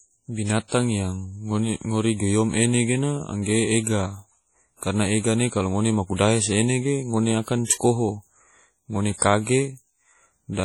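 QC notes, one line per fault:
Throughout, WMA compression: the speech carries a ringing, washy quality with a hiss that swells and fades along with the voice. This is likely a transform codec working at a low bitrate, consistent with roughly 32 kbps, whose quantisation noise smears over tens of milliseconds and whose weaker components get zeroed out. On a spectrogram, expect patchy, blocky gaps between harmonics, smeared energy around onsets, and a hard ceiling near 19.3 kHz.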